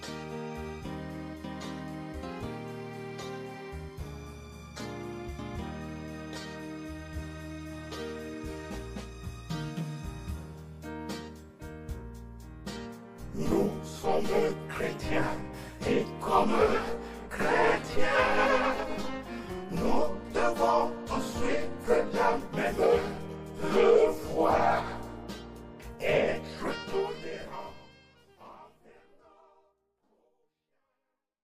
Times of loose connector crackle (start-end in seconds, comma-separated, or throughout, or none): none